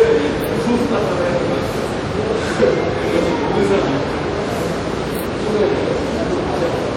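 Throughout the clip the sound rings and turns washy, with a hiss that swells and fades alongside it, plainly audible and likely WMA compression at a rate that fits roughly 48 kbps. A spectrogram shows a hard ceiling at 18 kHz, smeared transients, and gaps where weak detail was zeroed.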